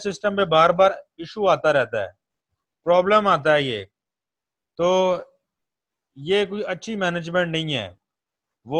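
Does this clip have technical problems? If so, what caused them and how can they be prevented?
No, no technical faults heard.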